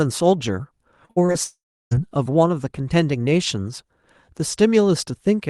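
From 1.05 to 1.36 s there is repeated packet loss with a robotic sound: four short holes, the longest 51 ms, each patched by stretching the preceding sound. Over 40% of that span is concealment, so the speech turns choppy and robotic, with pieces missing.

From 1.44 to 1.93 s the speech briefly continues as a fading buzz or hiss, then goes silent for about 0.33 s before resuming with roughly 0.48 s of material lost. The likely cause is a long network dropout in which no audio arrived.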